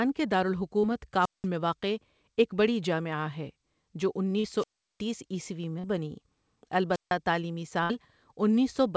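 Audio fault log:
0.80 s, 4.39 s and 5.79 s (each about 0.05 to 0.06 s long), short concealed packet loss: after "کے دار" and after "بڑی جامعہ ہے جو", and again at 5.79 s, about 40 ms of audio never arrived and was patched with 34 to 42 ms of extrapolated sound. Each patch is a brief smear or wobble. On a spectrogram, each patch sits beneath the 8 kHz ceiling of the call codec, which fits G.722.
1.18–1.47 s, 4.57–5.03 s and 6.90–7.13 s, wireless microphone squelch dropout: the radio signal faded, hiss rose, and the receiver's squelch muted the output for about 187, 367 and 154 ms. The first gap ends just before "میں واقع ایک بڑی". The waveform shows a flat near-zero hole after a patch of noise, and the spectrogram shows a broadband grey haze and then a blank band.
7.83–7.92 s, burst of packet loss: about 60 ms in a row was lost. The receiver carried the last sound forward for 63 ms and turned it down over that time, so it comes out as a short held buzz or fading hiss before the audio resumes further on. 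On a spectrogram, the patch dims as it goes on. The waveform shows an envelope that shrinks.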